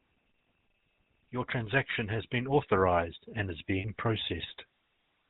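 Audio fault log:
throughout: GSM full-rate codec. The speech has a buzzy, gravelly roughness and plainly audible coding damage. The codec models the vocal tract as a filter and drives it with a coarse pulse train, keeping only every third sample of the excitation. The sharp spectral cut-off and grainy texture point to 13 kbps full-rate GSM. The fine detail of the voice source is lost, so the tone sounds harsh and reedy.
3.78–3.85 s: lost GSM frames. For about 60 ms the speech turns into a short, rough metallic ring. Those frames never arrived intact, so the decoder reused the settings of the last good frame to fill the gap. The length fits roughly three 20 ms frames. The repeated parameters give a frozen, buzzy ring where the speech should have kept moving.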